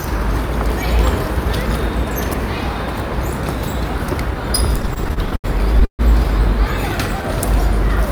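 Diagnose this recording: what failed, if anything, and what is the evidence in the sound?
Repeated stalls (stutter) from 4.77 to 6.01 s. This is a network and jitter-buffer fault. Packets arrived late, so the buffer emptied twelve times. Each gap was bridged by stretching the last sound, the longest by 140 ms. About 334 ms was filled in with nothing lost, so the audio drags unevenly.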